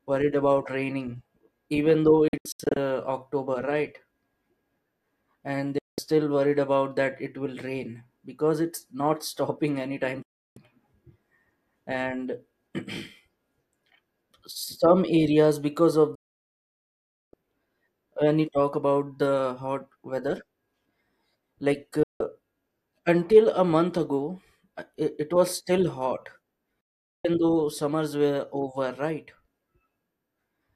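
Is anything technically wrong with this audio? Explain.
Yes. The speech has six digital broadcast dropouts, at 2.28, 5.78, 10.22, 16.15, 22.03 and 26.81 s. The receiver lost the signal or rejected corrupt frames, so it muted until clean data returned. Each gap fades out in about 3 ms. The first is a cluster of short holes across 480 ms, the longest 72 ms. The worst silences 1.2 s from 16.15 s. The losses fit whole 24 ms frames.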